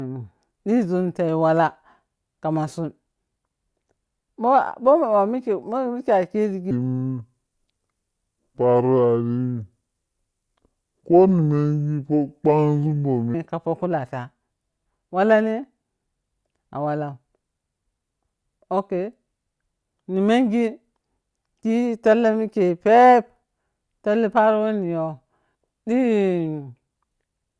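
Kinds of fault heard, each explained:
Wrong sample rate: speech slows to 0.69 speed and drops about 6.5 semitones at once, fitting 32 kHz audio played at 22 kHz, unlike pitch shifting.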